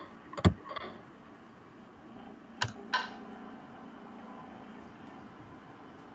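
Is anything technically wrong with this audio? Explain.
Yes, there's an echo leak. From the start to 0.35 s, and again from 0.52 s to the end, a faint copy of the speech trails about 316 ms behind, well below the main level. It's likely a far-end speakerphone whose echo canceller let its own pickup slip back into the call.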